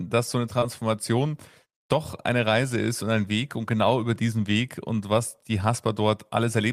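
Around 0.59 to 0.67 s the audio shows short concealed packet loss. About 20 ms of the stream failed to arrive, and the receiver covered it with roughly 24 ms of synthesised continuation before cross-fading back, stretching that stretch by a few milliseconds. It is heard as a brief smear or wobble. On a waveform the gap shows as an oddly smooth, repetitive segment. On a spectrogram the harmonics or noise texture look frozen and blurred for that instant.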